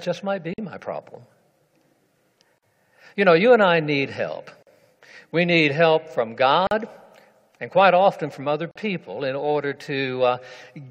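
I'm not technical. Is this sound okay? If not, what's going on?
No. The sound drops out briefly five times, at 0.54, 2.58, 4.63, 6.67 and 8.71 seconds, every two seconds. Each silence lasts about 45 milliseconds, then the sound picks up right where it stopped. This is a gap at a join of encoded pieces. The audio was compressed in separate two-second chunks and stuck back together. Each chunk kept its own small stretch of leading silence and end padding, so every join leaves a tiny hole.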